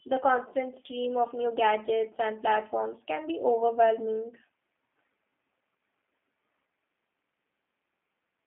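From the first moment to the last, the speech carries the G.729 codec's signature, and the damage is plainly audible. The sound is rebuilt from a vocal tract filter and a pitch predictor with a sparse pulse excitation at about 8 kbit/s, which leaves it rough and faintly synthetic. Bandwidth sits in a telephone band of roughly 200 Hz to 3.5 kHz, so sibilants are dulled, the low end is thin, and nothing above the band survives.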